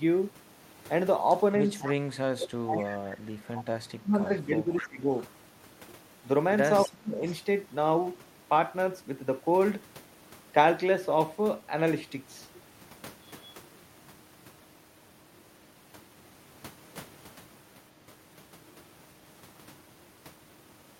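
A far-end echo canceller that was likely failing to remove its loudspeaker pickup lets an echo leak back at 1.65 to 1.92 s, 3.56 to 3.64 s, 4.2 to 4.87 s and 6.84 to 7.33 s. It is a faint copy of the speech trailing by 253 ms, about 15 dB down, and about 25 dB down in the last stretch. Alongside these, the canceller, likely confused by both sides talking at once, produces speech suppressed in double talk at 2.26 to 3.37 s, 3.96 to 5.13 s and 6.86 to 7.22 s. The voice ducks by roughly 20 to 35 dB, deepest in the final stretch.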